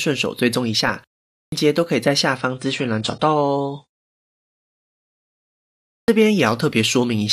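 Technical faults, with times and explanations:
1.38 s and 5.92 s: clipped start after a pause. Each time speech resumes out of silence, about 0.14 s and then about 0.16 s of its onset is missing, so the first sounds are cut off and the speech begins abruptly. The second case follows a longer gap of 2.13 s, the first only 0.39 s. The output path apparently drops into an idle state during the quiet and takes this long to wake and resume, swallowing the opening of the next sound.
2.37–4.37 s: adaptive stream at a lower bitrate. For two seconds the sound switches without any gap to a duller, more processed version. Nothing remains above 10 kHz, and coding artefacts become more audible. The sudden drop and the sudden return point to the player fetching a lower-quality rendition when throughput dipped, consistent with AAC at roughly 57 kbit/s in place of about 96 kbit/s.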